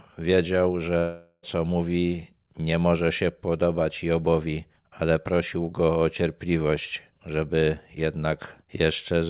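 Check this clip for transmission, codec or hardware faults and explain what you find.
One transmission fault stands out: a long network dropout from 0.98 to 1.45 s, audible in a call path that carries nothing above 4 kHz, consistent with G.711 A-law at 64 kbps. The likely cause is a stretch of packets that never reached the receiver. The receiver's concealment kept extending the last sound, which smears into a fading buzz for about 0.44 s, then leaves a brief gap of near-silence before the audio resumes at "mówi nie może się", with the lost portion simply gone.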